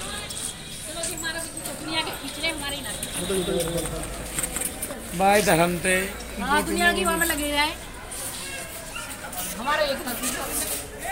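From 3.24 s to 4.94 s a doubled audio track appears: a second, full-band copy of the sound runs roughly a fifth of a second behind the original at about the same level. The likely cause is the signal being captured again through a slower path, or an edit leaving two copies out of step. Unlike an echo or reverb, the repeat neither decays nor carries room colour, and it cuts in and out abruptly.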